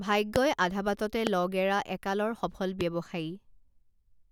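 Loud pops in this speech recording at 0.36–0.38, 1.27–1.29 and 2.81–2.83 s, each a single sharp hit roughly 15 to 20 dB above the speech, likely from brief electrical transients.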